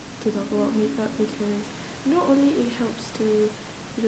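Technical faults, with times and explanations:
No technical faults are audible in this recording.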